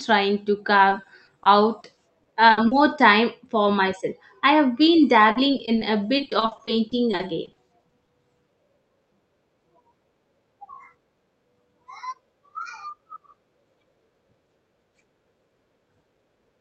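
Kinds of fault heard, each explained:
Repeated packet loss (robotic sound): packets kept dropping, each short gap filled by extending the last sound, leaving choppy, robotic speech from 0.89 to 2.73 s and 5.31 to 8.09 s.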